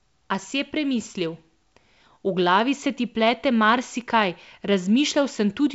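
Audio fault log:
No fault is heard anywhere in the clip. The speech comes through G.722 wideband telephone coding at 64 kbit/s, reaching up to about 7 kHz with at most a faint hiss in the band above 4 kHz.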